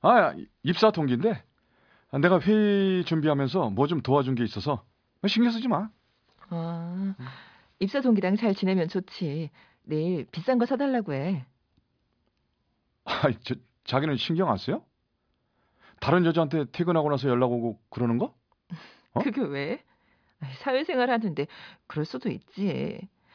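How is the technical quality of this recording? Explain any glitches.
No glitches or technical faults are audible anywhere in this speech recording.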